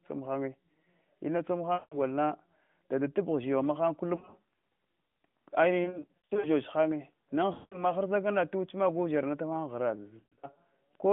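Radio errors corrupted AMR speech frames on a narrowband mobile link, and the decoder concealed each lost frame by repeating the last good pitch and vocal tract settings at falling gain. At 1.74 s and just after "na an" at 7.54 s, solid runs of about 180 ms smear into a fading drone. At 4.16 s, 5.84 s (spread over 0.6 s) and 10.20 s, the lost AMR speech frames are scattered, giving choppy dips and warbles before the voice returns briefly rough.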